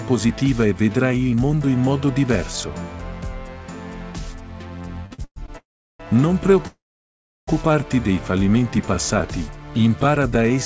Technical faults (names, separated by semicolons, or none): repeated stalls (stutter); call audio freeze